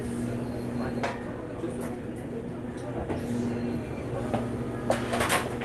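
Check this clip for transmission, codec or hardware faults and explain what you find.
Two transmission faults stand out in this everyday-sound recording: a skip ahead followed by a jitter buffer speed-up. Both arise in a call path whose Opus-style coding, with content stopping near 12 kHz, is audible but not faulty.

At 1.03 to 1.05 s the sound lurches forward, with events on either side of the cut butted together and no silence bridging them. About 0.7 s of audio is simply absent. This is a skip ahead. The receiver discarded a run of audio, either lost in transit or dropped when its jitter buffer overflowed, while newer audio was already queued. Playback resumed from that later point, stitching the two edges almost directly.

From 1.13 to 2.25 s the sound runs noticeably quick, roughly 9% fast, yet its pitch stays unchanged, giving a hurried, compressed feel. This is a jitter buffer speed-up. 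After a backlog built up in the buffer, the receiver trimmed it by repeatedly cutting out tiny slices one or a few pitch periods long. Across this stretch that removes around a tenth of a second in total, shortening the delay without shifting pitch.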